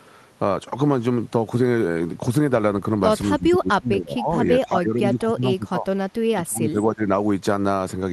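An echo canceller that likely could not tell this speech from loudspeaker echo while both sides talked turned it down, giving speech suppressed in double talk from 3.28 to 4.44 s, 4.63 to 5.87 s and 6.28 to 7.03 s. The voice sinks by up to about 20 to 25 dB, through a call codec whose top end stops near 12 kHz.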